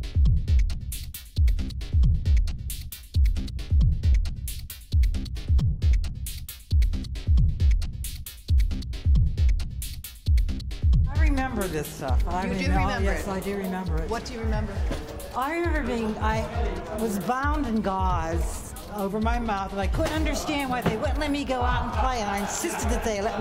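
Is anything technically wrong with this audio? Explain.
Yes. From 11.37 to 12.13 s and again from 19.01 to 19.99 s, a drift correction step likely slowed playback to refill a clock-matching buffer. The sound runs about 5.9% slow and drops roughly a semitone (−104 cents), then snaps back.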